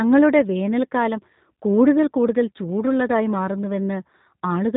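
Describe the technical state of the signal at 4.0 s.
G.729 codec damage is present at 4.0 s and across the whole clip. The speech is rebuilt from a vocal tract filter, a pitch predictor and a few pulses per 5 ms half-frame, which fits an 8 kbit/s rate. Nothing above 4 kHz survives, and the speech sounds plainly rough and synthetic.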